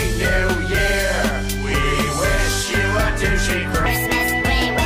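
The audio has a section at the wrong speed, running from 3.86 s to the end of the clip. From that point playback runs 1.5 times faster, so everything sounds hurried and sits roughly seven semitones higher. The speed and pitch change together at one sudden moment, which sets it apart from a pitch-shift fault, where the pitch moves but the timing stays the same. The likely cause is an editor or player running that part on the wrong clock.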